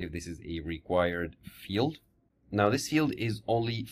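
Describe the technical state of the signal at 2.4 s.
At 2.4 s the signal is intact, with no audible fault at that moment.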